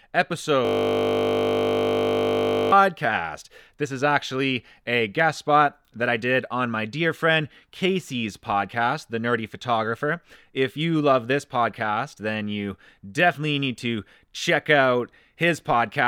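From 0.65 to 2.72 s the speech freezes into a system hang loop. A 20 ms buffer repeats over a hundred times, producing a steady 50 Hz buzz.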